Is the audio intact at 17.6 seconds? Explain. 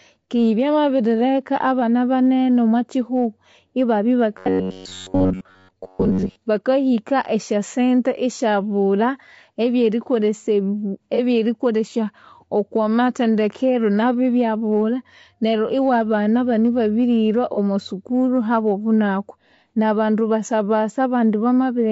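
No. From 17.54 to 17.58 s, just before that moment, one lost AAC frame was concealed by the decoder rebuilding it from the previous spectrum. It leaves a brief smeared, noisy patch, not a dropout to silence.

The whole clip also has rough, grainy speech with noise between harmonics, likely from low-delay AAC compression at a low bitrate. That graininess is steady throughout, not confined to one moment.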